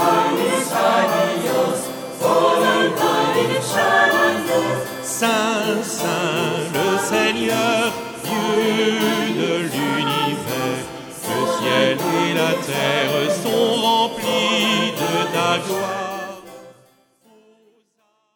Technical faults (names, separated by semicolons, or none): none